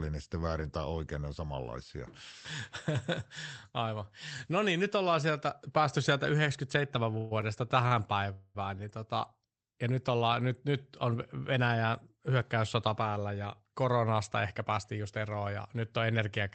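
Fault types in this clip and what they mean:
call audio freeze: twice, at 7.17 to 7.33 s and 8.33 to 8.57 s, just before "niin tota ja nyt", the sound is held as a fading buzz, likely from packets delayed until the jitter buffer emptied. The spectrogram shows smeared, decaying bands; the waveform shows a tapering hold, nothing lost.
short stall from a late packet: at 7.9 s one packet arrived late, so the last sound is stretched by about 32 ms before carrying on from the same point. On a spectrogram that shows as a brief horizontal smear, and the waveform shows a short repeated hold with a slight dip.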